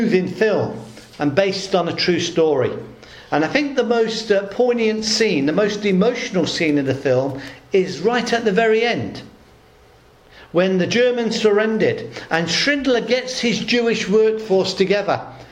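No technical faults are audible anywhere in the audio.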